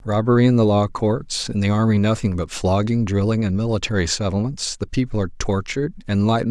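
Nothing is technically wrong with this speech clip.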